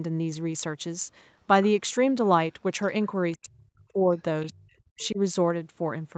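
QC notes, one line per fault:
3.34–4.09 s and 4.50–5.19 s, speech suppressed in double talk: The speech dips, falling by roughly 40 dB at its deepest. About half a second is lost in each span. The likely cause is an echo canceller that could not separate the talker from the loudspeaker echo while both sides spoke, so it turned everything down.
4.41–4.61 s and 5.02–5.07 s, other side's voice leaking through: A second, faint voice comes through in short scraps, around 25 to 30 dB below the main speech. This is likely loudspeaker playback of the far end that the echo canceller did not fully remove from the microphone.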